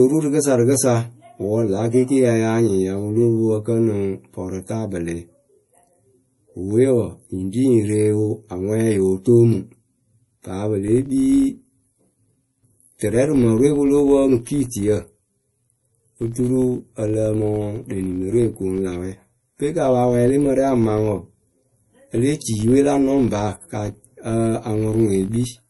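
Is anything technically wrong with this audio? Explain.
Yes, there are two faults.

Throughout the clip, the speech carries plainly audible codec damage, likely from MP3 compression at a low bitrate, around 48 kbps. Short of bits, the encoder discards weaker frequency lines, which then drop in and out from frame to frame, and it removes the top of the spectrum. The result is a watery, swirling texture with chirpy sibilants and smeared attacks, and nothing is heard above 11.5 kHz.

From 10.88 s to the end, a filter is restarted on every block: it loses its internal state between blocks and begins each one as if from silence. Each block boundary therefore produces a small transient, and these repeat as a 50 Hz buzz, which fits blocks about 20 ms long. The buzz rises and falls with the level of the speech.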